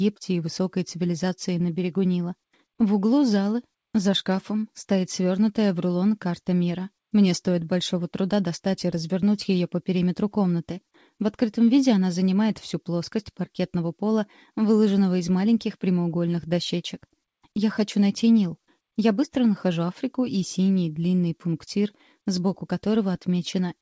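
No technical faults are audible: the signal runs without dropouts, distortion or glitches, and its content stops at 8 kHz, which fits its passage through a wideband G.722 call path at 64 kbps.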